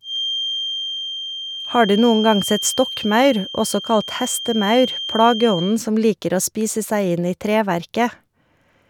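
A speech recording carrying a feedback whistle: a thin, steady 3.2 kHz tone, about 10 dB below the signal, from 0.0 s until 5.80 s, just before "som liker", likely a loudspeaker-to-microphone loop held at the edge of feedback.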